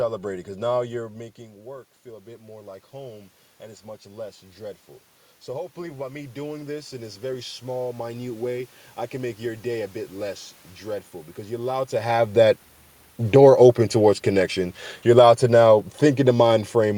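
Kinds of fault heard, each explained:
Automatic gain rising: the gain control judged the input too quiet and raised its gain slowly, so the speech and the room noise swell together rather than the voice alone. From 0.27 to 3.37 s the input level drops by about 16 dB as the talker moves away around 1.0 s, and the gain climbs about 6 dB before "and it's much less". A second rise of about 6 dB runs from 5.52 to 9.7 s, ending before "a bit less dreadful".
Automatic gain falling: the gain control judged the input too loud, or its background noise too strong, and pulled its gain down gradually, so the level starts high and then sinks, with the background noise dropping along with the speech. This begins at 12.92 s, just after "allowed to have that", and continues to the end of the clip near 17 s.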